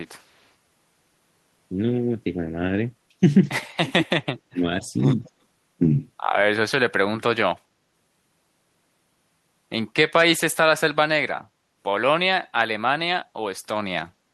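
An echo canceller at the far end likely let some of its loudspeaker pickup through, so from 0.19 to 0.5 s an echo leak returns a faint copy of the speech about 222 ms late, some 40 dB down, a ghostly trailing shadow. From 3.76 to 4.64 s the canceller likely mistook overlapping talk for echo and clamped down, so the speech suppressed in double talk drops by as much as about 40 dB in pieces adding up to around half a second. A brief echo leak from 5.24 to 5.31 s, again likely from the canceller, repeats at the same 222 ms delay, louder at about 30 dB down.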